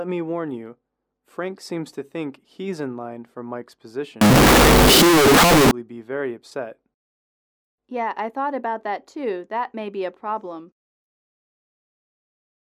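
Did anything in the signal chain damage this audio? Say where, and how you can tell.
Yes. From 4.21 s to 5.71 s the audio turns into a wall of harsh, very loud distortion, and whatever was quiet there comes out just as loud as the peaks. That pattern points to a sample-format conversion fault, likely signed and unsigned mixed up on 16-bit samples. Reading the format wrongly flips the top bit, so every crossing through zero lands at the opposite extreme of the range. Low-level detail becomes maximum-amplitude jumps.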